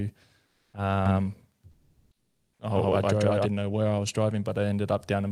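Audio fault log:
0.45–0.73 s and 1.71–2.59 s, comfort noise in place of the background: in both pauses the real background, sitting about 50 and about 55 dB below the loudest sound, gives way to a flat, featureless hiss lasting 280 ms and then 880 ms. The first patch is about 3 dB louder than the background it covers, the second about 6 dB quieter. This is likely discontinuous transmission in Opus, with the receiver synthesising noise while the sender is silent.
1.06–3.46 s, doubled audio track: a second full-band copy of the speech runs roughly a tenth of a second behind the first, at much the same level, giving a hard slapback with no reverberant tail or room colouring. It cuts in and out abruptly at both ends, and the end falls just before "know where I was". Likely cause is the same signal reaching the mix twice, once through a slower capture path.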